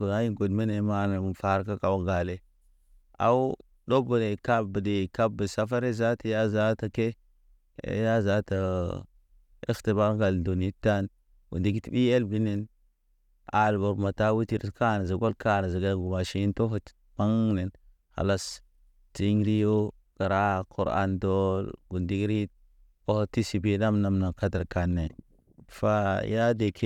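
Nothing in the recording trips any alarm; it's a stretch of speech that simply runs its course without a glitch, dropout or stumble to point at.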